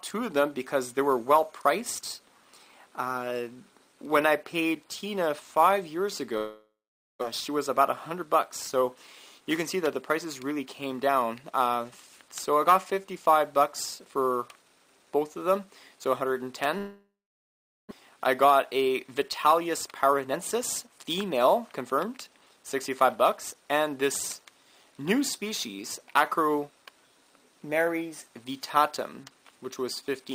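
At 6.37 s the audio breaks off: the last sound is stretched into a fading buzz or hiss, then about 480 ms of near-silence follows until 7.23 s, and around 600 ms of material never returns. This is likely a long network dropout, with the receiver concealing the gap and then resuming later in the stream. A second, longer one runs from 16.78 to 17.93 s, with about 790 ms of near-silence inside roughly 1.13 s of concealment and again about 600 ms lost.

After each gap a jitter buffer speed-up follows, the receiver trimming short pitch-period slices to cut excess delay. From 7.49 to 8.96 s playback runs at 106% and from 10.26 to 11.52 s at 107%, each removing roughly 100 ms. From 18.00 to 22.75 s it runs at 110% and sheds around half a second. The pitch holds steady while the timing sounds hurried.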